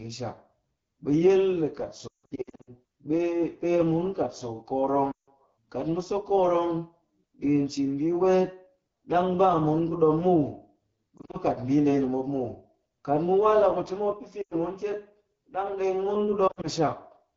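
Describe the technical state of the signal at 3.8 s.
Rough, raspy speech with plainly audible coding damage runs through this point and the whole clip: AMR wideband (HD Voice) codec at 8.85 kbit/s, too low a rate for its pulse-driven vocal tract model.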